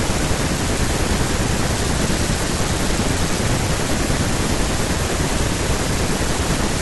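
From 1.75 s to 3.39 s the speech goes through a Bluetooth SBC bit pool drop: the link backs off its bit budget, so the top sub-bands starve and the rest get coarse. Treble dulls and gritty noise creeps in, which fits a bit pool falling from about 28 to 11, roughly 90 kbps.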